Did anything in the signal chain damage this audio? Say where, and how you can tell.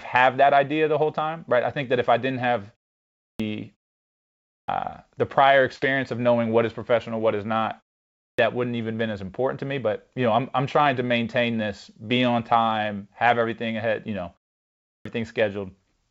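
Yes, at playback. The speech four times restarts abruptly out of silence with its opening sounds missing, at 3.18, 4.43, 8.15 and 14.81 s, each after a pause of 0.41 to 0.75 s. Roughly a quarter second, 0.22 to 0.25 s, is lost each time. This is a clipped start after a pause. The output device goes to sleep during the gap and needs that much time to wake and lock again, so the start of the next phrase never plays. The band above 8 kHz is empty, as expected from the G.722 call path.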